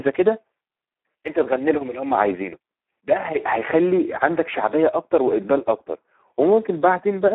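Speex codec damage runs from start to end. This CELP speech codec is working at a very low setting, consistent with about 8 kbps, so it has too few bits to describe the excitation signal. The speech comes out noisy, hoarse and robotic in places. The passband is narrow, roughly 250 Hz to 3.6 kHz, with nothing above 3.6 kHz, so the voice sounds thin and telephone-like as well as rough.

A block size mismatch (truncated) occurs from 0.66 to 1.47 s. One stage hands over longer blocks than the next stage takes in, and the tail of each block is discarded. Every cut leaves a discontinuity, and the cuts repeat at 46.9 Hz, producing a low buzz over that stretch. The rate fits a 1024-sample write block. The speaking pace and pitch stay about the same through the fault.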